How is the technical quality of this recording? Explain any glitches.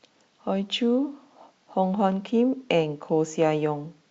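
No glitches or technical faults can be heard anywhere in the speech recording.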